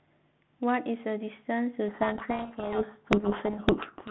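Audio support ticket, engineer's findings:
Codec payload misread, 1.88 s to end. Speech buried under harsh, rasping distortion. Probable component: G.726 decoder. Receiver reads each ADPCM code word in reversed bit order. Difference values and predictor adaptation go wrong. No recovery before clip ends. Before 1.88 s, the 32 kbit/s G.726 path is audible as telephone band, about 150 Hz to 3.6 kHz, with light coding noise.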